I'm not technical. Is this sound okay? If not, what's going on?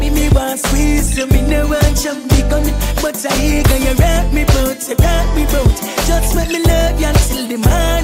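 No. Around 4.99 to 5.15 seconds there is hard clipping. The sound briefly got slightly too loud for the recording to hold. Its loudest peaks were cut off flat. That adds a short crackle on those peaks.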